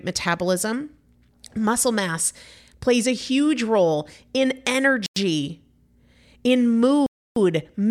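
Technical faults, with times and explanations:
5.06–5.16 s and 7.06–7.36 s, Bluetooth stall: the speech cuts to silence for about 0.10 s just after "a huge role in", then for about 0.30 s, resuming each time. This is likely interference delaying wireless packets until the headphones' buffer emptied and playback paused.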